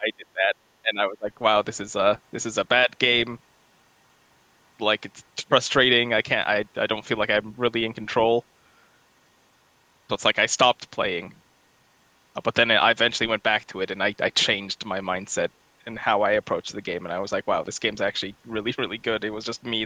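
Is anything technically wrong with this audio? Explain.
Yes. The speech is pulled down in three places, from 0.00 to 0.55 s, from 0.82 to 1.31 s, and briefly from 2.85 to 2.90 s, which sounds like speech suppressed in double talk. The likely cause is an echo canceller that, with both sides talking at once, mistook this talker for loudspeaker echo and attenuated it. The first two dips are deep, around 25 dB, and the last is only a slight fade. Unlike packet-loss dropouts, the level sags rather than falling to silence.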